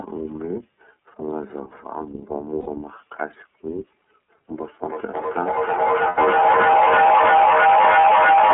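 From start to finish the speech passes through the iLBC codec. Its 30 ms frame structure fits the 13.33 kbps mode. It sounds slightly rough and synthetic. A spectrogram shows energy confined to roughly 200 Hz to 3.4 kHz, with nothing above it.

From 2.61 to 2.68 s a short run of lost iLBC frames, about 60 ms and consistent with two 30 ms frames, is concealed by repeating the last pitch cycle with added noise. It is heard as a brief held, buzzy vowel. The waveform shows a repetitive periodic stretch, then clean recovery.

From 4.56 s to the end, feedback echo between two devices builds up. Another device's loudspeaker feeds this microphone, and each echo canceller removes only its own device's playback. The speech therefore returns roughly every third of a second, thinner and ringing each time. The loop reaches about 12 dB above the direct speech, so the repeats pile up instead of fading. 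A spectrogram shows regularly spaced copies of each syllable stacking up.

Further lost iLBC frames follow. The gap from 6.08 to 6.19 s, around 90 ms and suggesting three frames, sounds like a longer held vowel that fades as the concealment decays. At 8.01 to 8.04 s a roughly 30 ms loss, fitting a single frame, leaves only a brief buzzy blip.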